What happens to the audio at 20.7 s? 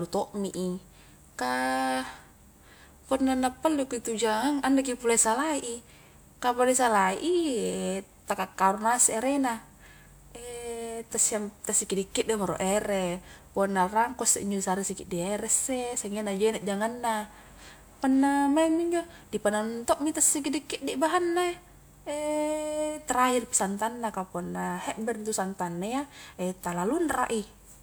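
Nothing goes wrong at 20.7 s: the speech carries on intact through that moment, with no dropout, click, distortion or other fault to be heard.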